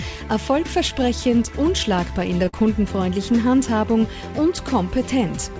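A short stall from a late packet comes at 2.45 to 2.48 s. A packet arrived after its playout time, so the jitter buffer ran dry and the receiver stretched the last sound for about 16 ms until the data turned up. Playback then resumed from the same point, so nothing is lost, but the delay grows by about 16 ms. What you hear is a sound held a touch too long, with a faint buzz or dip.

Short concealed packet loss follows at 2.49 to 2.68 s. About 40 ms of audio never reached the decoder in time. The receiver covered the gap with 43 ms of synthesised continuation, pitched where the sound was voiced and noise-like where it wasn't, then faded back into the real signal. The patch adds only a few milliseconds of delay and comes across as a brief smear or wobble in which a short sound can vanish. Through both faults the G.722 call path shows nothing above 8 kHz.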